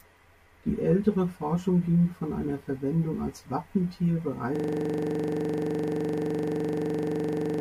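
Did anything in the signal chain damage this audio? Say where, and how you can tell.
Yes. From 4.56 s to the end, a system hang loop at the driver or buffer stage: one 42.67 ms slice of speech repeats exactly, over and over, producing a rough 23.4 Hz stutter-buzz. The machine froze while the audio hardware kept replaying the same ring buffer, a length that fits a 2048-sample buffer. On a waveform the same shape tiles identically; on a spectrogram, vertical stripes every 42.67 ms with a frozen, unchanging spectrum.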